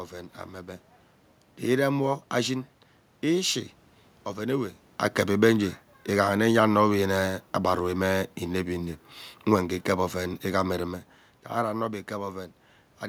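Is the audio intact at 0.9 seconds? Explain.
Yes, the audio is intact at 0.9 seconds, with no technical fault at that point; the background noise there is just the room itself.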